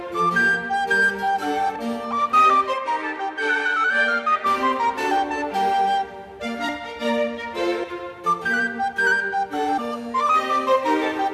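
At 1.75 s, compressed frames are skipped. Roughly 150 ms of sound goes missing, about seven 21.3 ms frames.

From 2.74 to 4.46 s, the sound turns duller, with nothing above 10.5 kHz. Faint new noise sits roughly 45 dB down. The likely cause is the input switching to a poorer device.

More skipped frames follow at 6.68 s (about 150 ms), 7.83 s (about 200 ms) and 9.77 s (about 300 ms).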